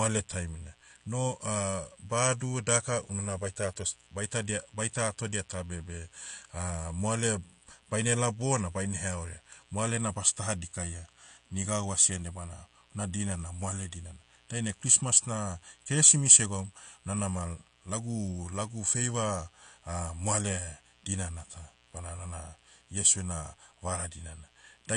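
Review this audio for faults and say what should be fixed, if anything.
A steady mains buzz runs through the whole clip, from start to finish. It is a raspy tone built on 60 Hz. It sits about 35 dB below the speech, so it is quiet but always present. Sharp switching spikes, from something like a dimmer, a rectifier or an unshielded line, enter the signal twice every mains cycle. Those spikes create a ladder of 60 Hz harmonics that climbs well into the kilohertz range. That gives the buzz its gritty edge. To prevent it, keep the audio chain away from dimmers and power supplies, use shielded balanced cables, and fix any ground loops.

The speech also sounds dull and smeared for the entire clip. Nothing is present above 9.8 kHz, so sibilants lose their crispness. Sustained sounds carry a warbling, fizzy texture that is plainly audible. This is likely AAC compression at a low bitrate, around 32 kbps. 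At that rate the encoder lowers its cut-off to save bits. It then coarsely quantises what remains, leaving gaps in the spectrum or filling bands with substitute noise. To prevent it, record and deliver at a higher bitrate, or keep a lossless master.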